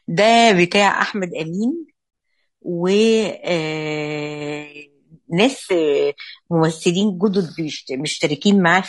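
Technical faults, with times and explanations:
throughout: low-delay AAC compression. The speech is rough and grainy, with plainly audible codec damage. Noise fills the gaps between the voice harmonics, and the top band sounds thin or synthetic. The short analysis frames of a low-delay coder, likely AAC-ELD at a rate that fits around 32 kbps, cannot resolve the pitch harmonics finely and leave few bits for detail. On a spectrogram the harmonic stripes look smeared, the spaces between them are filled with haze, and the highs above several kHz look patchy and blocky.
2.09–2.13 s: AAC frame loss with muting. The sound drops out for 40 ms, which fits a pair of lost codec frames. The decoder replaced the missing spectra with silence. The overlapping synthesis windows fade the sound down and back up rather than cutting it, so the gap has soft edges. On the waveform the envelope tapers smoothly into a short flat stretch and then tapers back out. 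On a spectrogram a narrow vertical blank runs across all frequencies, with blurred rather than sharp edges.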